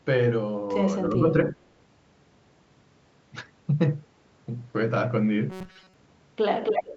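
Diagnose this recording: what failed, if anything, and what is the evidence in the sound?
Two short dips in the voice point to call processing. The first runs from 1.1 to 1.37 s and pulls the level down by about 10 dB. The second, at 1.53 to 1.58 s, is brief but deeper, roughly 15 dB. This is speech suppressed in double talk, likely from an echo canceller that heard both sides at once and turned the near talker down with the echo.

From 5.5 to 5.94 s the voice turns into a stiff, metallic buzz near 188 Hz. It still tracks the speech loosely. This is robotic sound from repeated short buffers, at the driver or buffer stage or in the network jitter handling. Audio arrived too seldom, so a short slice was replayed in place of most of the real signal. A 188 Hz buzz fits a repeat of roughly 5.3 ms, likely one small buffer looping.

From 6.63 s to the end, a second copy of the voice trails the first by 272 ms. 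It is about as loud as the direct speech. This is echo leak at the call-processing stage. The far end likely played the call on a loudspeaker. Its echo canceller failed to remove what its microphone captured, and the delayed copy came back. The lowest bass is still trimmed, as the call's microphone processing normally shapes it.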